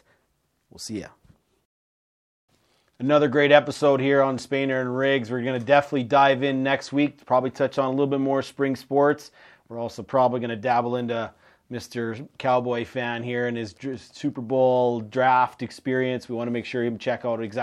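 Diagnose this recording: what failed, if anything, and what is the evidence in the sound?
A block size mismatch (truncated) at the driver or buffer stage: a steady 46.9 Hz buzz throughout, consistent with 1024-sample blocks, block tails discarded, speed essentially unchanged.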